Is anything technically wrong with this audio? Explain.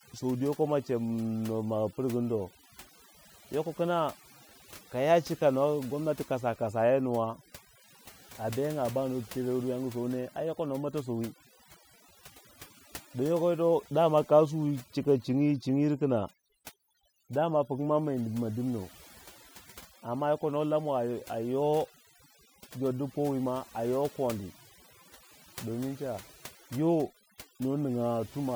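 Yes. Throughout the speech there is overdone noise removal. A noise reduction stage was driven too hard, so any frequency band sitting close to its noise estimate gets pulled far down or shut off entirely, and the softer components of the voice are caught along with the noise. The background drops and breaks up into twinkling, warbling specks.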